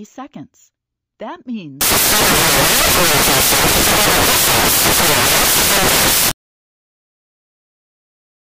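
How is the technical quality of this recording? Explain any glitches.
Poor from 1.81 s onward. From there to the end, the audio turns into loud, harsh broadband noise. These are samples built from the wrong bytes. The reader assembles each sample's bytes wrongly, so the fast-changing low bits dominate.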